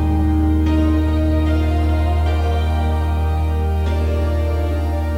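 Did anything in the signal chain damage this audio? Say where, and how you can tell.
Yes. From start to finish the sound carries a grainy, gritty distortion that rises and falls with the signal itself, roughing up quiet passages and making the lowest-level moments sputter or drop out rather than fade smoothly. The error sits only about 35 dB below the signal. This points to low bit depth without dither, most likely at a sample-format conversion stage: samples were rounded to around 7 bits with no dither, so the quantisation error tracks the waveform instead of forming steady hiss.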